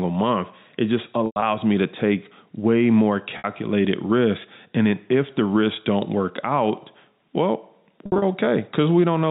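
At 1.26 to 1.42 s, 3.38 to 3.44 s and 8.06 to 8.22 s, packet loss with pitch repetition breaks the telephone-band speech. The receiver fills each gap by repeating the last pitch period. About 120, 60 and 120 ms go missing. Each starts as a held, buzzy tone, and the 100 ms run in the first fades into silence before the speech cross-fades back.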